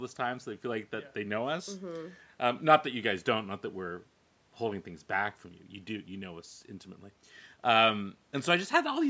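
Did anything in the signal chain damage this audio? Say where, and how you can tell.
No, nothing in the signal chain damaged this speech. What can be heard is a call's microphone processing at work: the background falls silent in the pauses and comes back in time for each phrase, and the audio carries nothing above 8 kHz.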